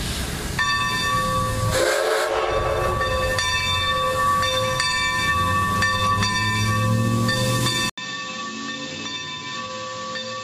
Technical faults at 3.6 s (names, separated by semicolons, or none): none